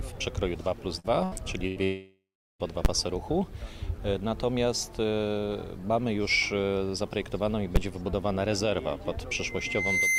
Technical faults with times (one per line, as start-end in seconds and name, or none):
0.99-1.34 burst of packet loss
1.67-1.79 burst of packet loss
1.84-2.62 long network dropout
2.85 invalid numbers at full scale
7.76 invalid numbers at full scale
9.36-10.18 loudspeaker feedback squeal